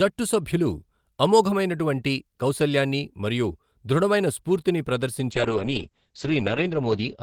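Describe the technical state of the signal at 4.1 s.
At 4.1 s the speech signal is intact, with no audible dropout, distortion, clipping or other fault.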